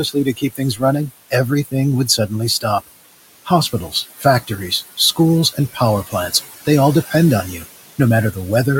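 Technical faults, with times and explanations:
Throughout: noise suppressor artifacts. The suppressor judges, frame by frame, which frequency bands hold steady background and lowers them by about 18 dB. The room noise, which sits about 14 dB under the speech, therefore falls away in the gaps and comes back beneath each phrase.
0.03–1.33 s, 1.64–1.74 s, 2.07–2.81 s, 3.45–5.18 s, 5.53–6.34 s (just before "they all"), and 7.51–7.66 s: speech cut by the noise suppressor. In these spans the suppressor mistook quiet parts of the speech for background and pulled them down with the noise, by about 9 to 17 dB at the deepest. Within each span the affected stretches add up to between a tenth of a second and about half a second. Soft consonants and word endings there sound swallowed or faint.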